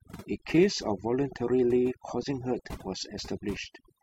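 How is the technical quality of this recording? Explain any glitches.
Overdone noise removal runs throughout this speech recording and degrades it. A noise reduction stage set far too aggressively pulls individual frequency bands down or out whenever they sit close to its noise estimate. Quieter parts of the speech fall below that line and vanish along with the noise. The gaps between phrases drop to near silence, sprinkled with twinkling specks. A spectrogram would show a dark, empty background dotted with isolated bright flecks, and ragged, hollowed-out speech harmonics.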